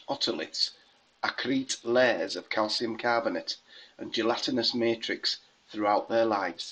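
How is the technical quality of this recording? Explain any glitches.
The recording has two Bluetooth SBC bit pool drops, from 0.62 to 2.82 s and from 5.97 s to the end. The congested link starves the encoder, so the speech loses its treble and turns gritty. This fits a fall from bit pool 31 to 9, near 72 kbps.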